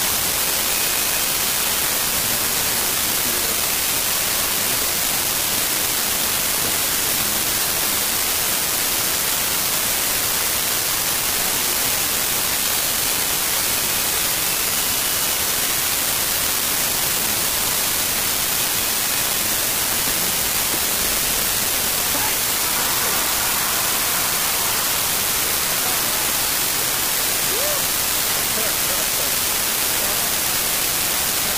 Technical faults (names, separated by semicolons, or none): unreliable data bit